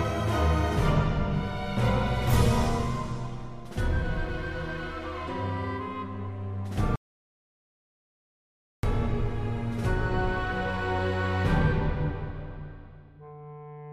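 The input signal was likely lost for a moment, through a dropped connection, failed link or stray mute, while recording continued writing silence. The result is an audio dropout to silence from 6.96 to 8.83 s: the sound cuts off abruptly, leaves about 1.9 s of silence with no room tone, then resumes mid-flow.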